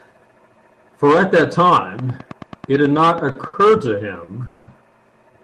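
From 1.99 to 3.72 s, interference from nearby equipment is likely injecting pulses into the signal, producing a train of clicks. About fifteen evenly spaced ticks arrive at roughly 9.3 per second, each peaking at about the level of the speech itself.

During the final stretch of those clicks and shortly after, packets arrived late and the jitter buffer ran dry. This caused short stalls from a late packet at 3.31 s (40 ms), 3.47 s (60 ms) and 4.24 s (40 ms). Each time, the receiver held the last sound until the packet came, so those moments drag slightly with a slight buzz or dip, but nothing is skipped.

From 4.46 to 4.69 s, packets held up in transit likely emptied the buffer for longer, causing a call audio freeze. For 210 ms the receiver stretched the last sound into a fading buzz or hiss, with no true silence, then resumed exactly where it stopped. The result is a gap inserted into the speech.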